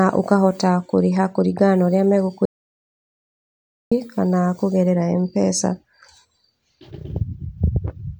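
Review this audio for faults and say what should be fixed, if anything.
There's an audio dropout to silence from 2.45 to 3.92 s: the speech cuts off mid-flow and about 1.46 s goes silent, no room tone at all, so whatever was said there is gone. That points to the input signal being lost, likely a disconnect or an accidental mute, while recording carried on. To prevent it, secure the cables and connections and monitor the input live so a dead signal gets caught right away.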